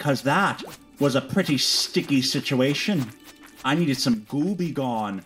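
The sound runs cleanly until about 4.14 s, when it suddenly drops by about 6 dB and stays quieter right to the end at 5.25 s. That's a classic case of one channel dropping out. With the stereo folded to mono, losing a side halves whatever both channels shared, hence the 6 dB step, and anything that lived only in the missing side vanishes outright. The likely cause is a loose connection or a brief fault on one leg of the stereo path.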